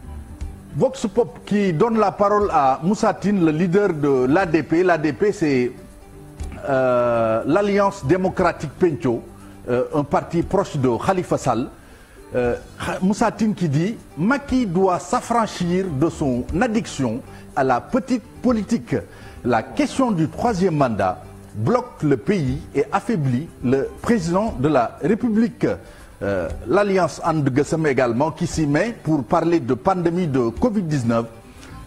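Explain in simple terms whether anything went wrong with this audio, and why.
Nothing went wrong here: no audible defects anywhere in the clip.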